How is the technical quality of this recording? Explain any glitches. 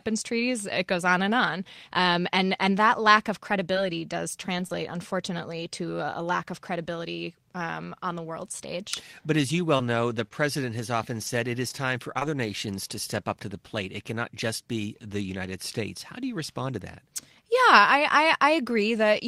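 The recording has packet-loss trouble in a few spots, clustered around 4 seconds and again between roughly 10 and 12 seconds. Each is brief.

Short concealed packet loss hits at 3.73–3.77 s and 4.67–4.71 s, just before "unfortunately to a lack". About 20 ms of audio never arrived in time each time, so the decoder stretched the preceding sound over the hole and blended back. It comes across as a quick smear or wobble.

Lost packets rebuilt from error correction show up at 3.75–3.77, 4.59–4.61, 4.69–4.71 and 4.73–4.75 s, the middle two right before "unfortunately to a lack". In each case the next packet carried a low-bitrate backup copy, so there's no gap. Those 20 ms frames just sound a bit rougher and noisier.

Scattered short gaps run from 9.77 to 12.48 s. There are about five separate drops, none longer than roughly 20 ms, and together they make up only around 3% of that stretch. Each was patched by carrying the last sound forward, leaving small hiccups and ticks through otherwise clear audio.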